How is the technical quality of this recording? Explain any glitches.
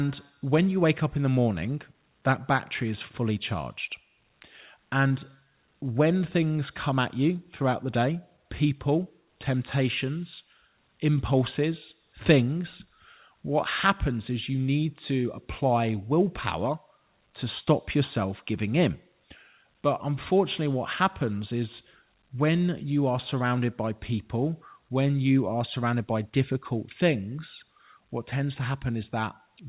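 The recording has one brief glitch, heard over call-path audio with nothing above 4 kHz, which fits a 64 kbps G.711 A-law telephone codec. From 5.08 to 5.12 s there is short concealed packet loss: about 20 ms never arrived, so the receiver extended the preceding sound and blended back. It comes across as a quick smear rather than a silent gap or a sharp click.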